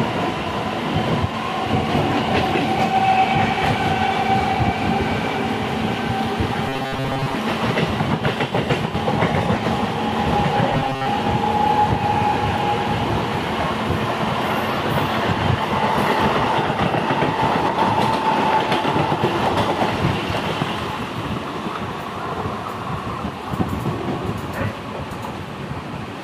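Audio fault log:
6.69–7.35 s and 10.73–11.07 s, robotic sound from repeated short buffers: a rigid 134 Hz buzz, likely a 7.5 ms chunk repeated in place of most of the audio.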